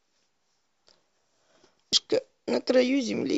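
A short glitch cuts into this speech clip at 1.93 s. It is damaged data in a compressed stream: a corrupted stretch of the encoded file made the decoder misread a frame and lose sync briefly before locking onto the next valid frame header.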